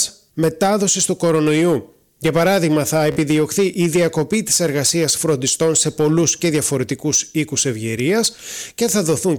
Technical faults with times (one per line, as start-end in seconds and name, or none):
3.12-3.17 Bluetooth stutter